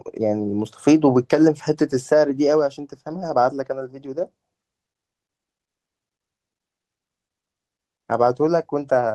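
From 3.07 to 3.25 s there is a lost packet rebuilt from error correction. Five separate packets went missing, and the decoder filled the hole with the reduced-bitrate copies carried in the packets that followed, so the speech continues without a dropout. About 100 ms of audio is reconstructed, which fits a handful of 20 ms frames. Across that stretch the speech turns rougher and grainier, with added noise.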